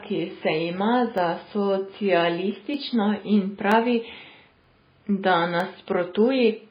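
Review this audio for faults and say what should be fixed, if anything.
The speech is dull and watery throughout, with the treble cut and swirling on the s sounds. That's likely MP3 compression at a very low bitrate, around 16 kbps. Encode from the original at a much higher bitrate.

There are dropped samples at 1.18 s, right after "ki se ima", then at 2.74, 3.72, 4.64 and 5.60 s. Each is a single sharp click where the waveform jumps, likely from a fraction of a millisecond going missing. Check the capture or streaming buffer for underruns.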